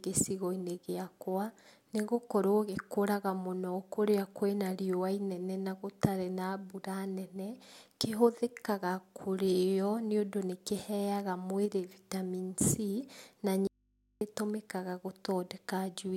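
Audio dropout to a faint residue, 13.67 to 14.21 s: the speech cuts off abruptly for about 0.54 s, leaving only mains hum roughly 40 dB below it. The likely cause is the signal feed breaking while the downstream input stayed live.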